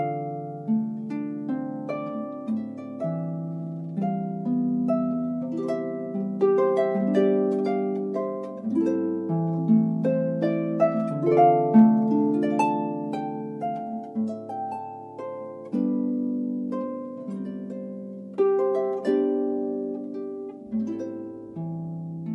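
No technical faults can be heard anywhere in the audio.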